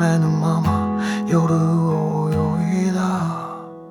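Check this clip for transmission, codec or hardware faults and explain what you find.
Nothing in the transmission chain, codec or hardware presents an audible fault anywhere in the clip.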